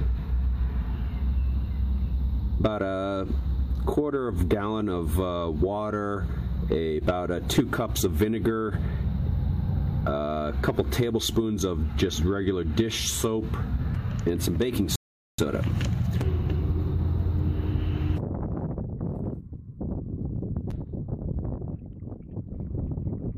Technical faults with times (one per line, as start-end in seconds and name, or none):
14.96-15.39 rebuffering stall